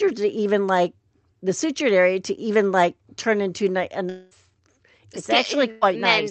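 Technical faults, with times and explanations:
4.09–4.33 s, long network dropout: The stream likely stopped delivering audio here, so the receiver had nothing real to play for roughly a quarter of a second. It bridged the gap by extending the last sound it had, which comes across as a synthetic buzz or hiss lasting about 0.22 s with no true silence. When audio returns, about 0.22 s of the original has been skipped, so the sound jumps ahead.
5.71–5.83 s, burst of packet loss: A short run of consecutive audio data failed to arrive in time, leaving a gap of about 0.1 s. The receiver covered it by repeating and progressively lowering the preceding sound, so the dropped stretch is heard as a brief held buzz or fading hiss rather than a clean cut. Playback then resumes with about 0.1 s missing, heard as a small skip in the audio, which carries the dull, band-limited tone of the Opus call path with nothing above 8 kHz.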